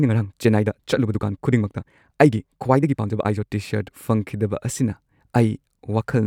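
From the very start of the speech to about 3.5 s, the pace is hurried, running roughly 1.62 times faster than normal while the pitch stays where it should, and then the delivery drops abruptly to a natural rate. This is a time-stretched section, likely squeezed by software to fit a shorter length: it keeps pitch by discarding short slices of the waveform.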